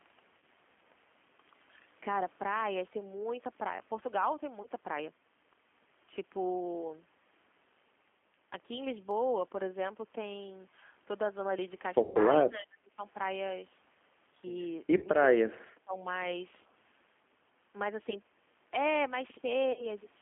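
The whole thing runs through a G.729 codec at 8 kbit/s, so the speech is squeezed into a 200 Hz to 3.4 kHz phone band and sounds a bit rough and synthetic. Early on, at 0.38 to 0.43 s, there's VoIP packet loss concealed by the speech codec. The decoder fills about 40 ms of missing audio by stretching its last frame into a fading buzzy smear, and it happens again at 4.62 to 4.67 s for about 20 ms. At 9.11 s a single sharp click sounds like dropped samples, likely only a handful of samples missing so the waveform jumps. The longest concealment runs from 12.03 to 12.18 s, about 120 ms, and there the stretched tone decays audibly. Right after, from 12.5 to 12.99 s, the voice dips by up to about 30 dB, speech suppressed in double talk, likely an echo canceller ducking the talker while the far side spoke. More concealment follows at 14.97 to 15.05 s, covering about 40 ms, then another double-talk dip of about 30 dB from 15.59 to 16.09 s. 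The last dropout sits at 19.72 to 19.87 s, about 40 ms concealed, and the voice stays a little weak as it recovers.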